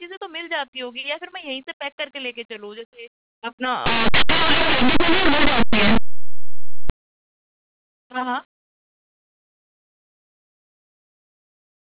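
From 3.86 s to 6.90 s the speech collapses into harsh, very loud distortion, in which the quietest moments blare as loudly as the strongest. This is linear audio read as companded: plain linear 8-bit samples are being expanded as if they were mu-law codes. Values sitting just to one side of zero map to the largest outputs while their neighbours stay tiny, so the waveform lurches violently between extremes.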